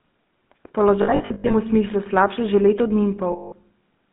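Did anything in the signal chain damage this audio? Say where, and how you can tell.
Yes. The damage comes from the codec stage. The whole clip carries the buzzy, gravelly roughness of the GSM full-rate codec, with sound confined to about 150 Hz to 3.5 kHz, which fits a 13 kbps GSM full-rate link. A spectrogram shows a hard ceiling at 3.5 kHz with an empty band above. The codec rebuilds each frame from a vocal-tract model driven by sparse, regularly spaced pulses, so fine excitation detail is replaced by a coarse, rasping texture.

The network stage adds lost GSM frames in two places. From 1.02 to 1.55 s, about 300 ms of frames drop out in gaps scattered over 480 ms, with the longest gap around a tenth of a second. From 3.32 to 3.53 s, about 200 ms is lost. In each gap the decoder repeats the last good frame, so the sound freezes into a metallic ring. On a spectrogram the bands smear into flat horizontal streaks. 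The waveform shows a repeated cycle.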